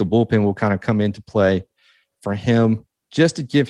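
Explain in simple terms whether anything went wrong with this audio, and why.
Nothing went wrong with this speech recording. At no point does the sound break up, jump or change in a way that would point to a problem.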